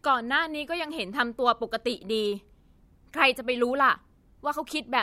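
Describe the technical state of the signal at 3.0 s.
At 3.0 s the speech signal is intact, with no audible fault at that moment.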